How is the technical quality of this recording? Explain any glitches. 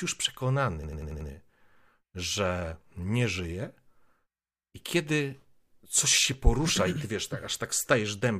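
The recording has one glitch. From 0.84 to 1.30 s there is a system hang loop: the driver stalled while the hardware kept replaying one buffer of about 93 ms (which fits a 4096-sample buffer) five times, producing a machine-gun stutter at 10.8 Hz. On a waveform or spectrogram it shows as identical, evenly spaced repeated blocks.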